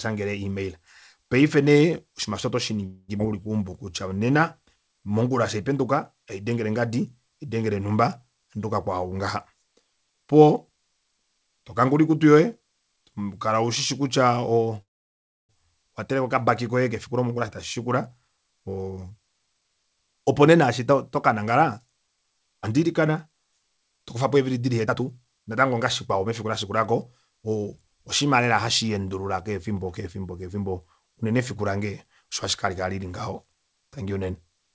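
At 2.86 s, just after "aasho oto", a call audio freeze begins and lasts until 3.10 s. The last sound is stretched into a fading buzz for about 0.22 s, with only a brief silence at the end. At 14.82 s a longer freeze runs to 15.51 s. A short tail leads into about 0.65 s of silence. In both cases delayed packets likely starved the jitter buffer. The sound then resumes where it stopped, with nothing lost.

At 3.18 s there is a skip ahead lasting until 3.21 s. Roughly 150 ms of audio is dropped. The two sides of the cut are joined almost directly, so the sound jumps forward abruptly.

From 3.30 s to 4.38 s, a jitter buffer slow-down plays the sound at 87% speed. The receiver repeats single pitch periods to add 145 ms and rebuild its reserve. The pitch stays the same, but sounds are drawn out.

A jitter buffer speed-up then trims the delay in three stretches. The first runs from 17.07 s to 17.38 s at 111% speed, ending just before "eshi tashi". 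The second runs from 17.78 s, after "eshi tashi", to 24.15 s at 109%, ending just before "eevili dili". The third runs from 24.86 s to 26.71 s at 113%. Short pitch-period pieces are cut, roughly 40 ms, 700 ms and 200 ms in turn. The pitch holds steady, but the pace sounds hurried. Throughout, nothing is heard above 8 kHz, which fits a G.722 call path at 64 kbps.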